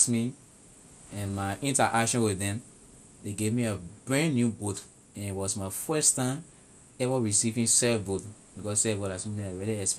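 Speech, dull and gurgling throughout, likely from MP2 compression at a rate near 80 kbps; a spectrogram shows upper bands flickering on and off.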